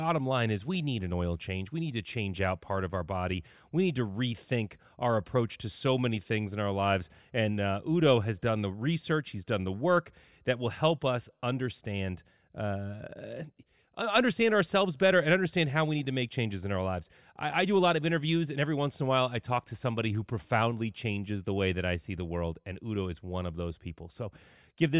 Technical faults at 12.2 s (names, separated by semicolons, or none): none